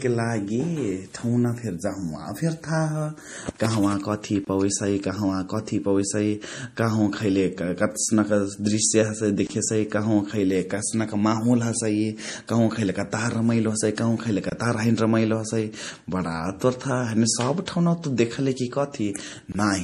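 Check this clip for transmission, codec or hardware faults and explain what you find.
Two faults are present: a codec problem across the whole recording and a series of regular dropouts.

Throughout, the speech has likely passed through a low-bitrate MP3 encoding before being saved again at a high bitrate, a low-bitrate audio saved at a high bitrate fault. The re-encode cannot restore what was discarded, so nothing remains above 15.2 kHz. That smeared, band-limited texture points to a first pass around 40 kbit/s.

At 4.45 s, 9.47 s, 14.50 s and 19.52 s there is a gap between chunks. The audio was delivered in 5-second blocks with about 25 ms of silence at each join. Nothing is missing, but each join cuts the speech with a short hole.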